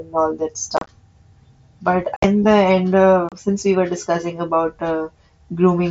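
Unconcealed Bluetooth headset packet loss occurs three times in the speech. From 0.77 to 0.89 s, about 68 ms of sound vanishes in scattered gaps spread over 120 ms, the longest 30 ms. From 2.16 to 2.24 s a similar 68 ms goes missing, mostly in one 60 ms hole. From 3.29 to 3.32 s another 30 ms of sound is lost.

Voice packets travelling between the headset and the phone failed to arrive, and nothing was inserted to cover them. Silence or an idle pattern fills each gap, leaving abrupt edges. The first burst, being scattered, sounds chopped and rough. The mSBC wideband headset link runs at 61 kbps, adding a light grain.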